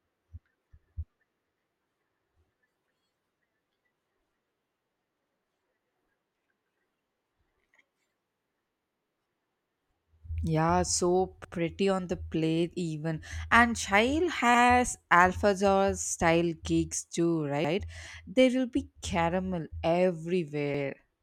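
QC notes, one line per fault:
11.45–11.55, 14.55–14.65, 17.65–17.75, 20.75–20.85 s, overlapping chunks: a regular stutter where 100 ms replays at each join, as each 3-second chunk starts before the previous one ends.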